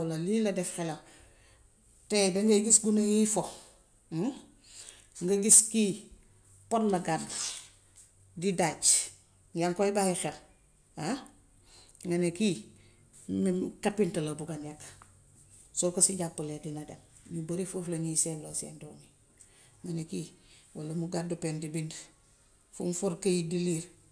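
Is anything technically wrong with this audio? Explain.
No, nothing is technically wrong with this audio.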